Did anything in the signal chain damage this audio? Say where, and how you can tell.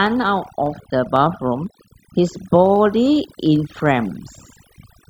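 Yes. Overdone noise removal in the processing stage affects the whole clip. The background drops and breaks up into twinkling specks. That points to bands being gated near a noise estimate, not codec smearing, which would leave the background intact.

Periodic USB or driver dropouts happen at the driver or buffer stage, from 0.07 s to 4.96 s, with a tick every 0.1 s, about fifty in all. Each skips a fraction of a millisecond of audio. The strict regular spacing separates these from network loss, which is irregular.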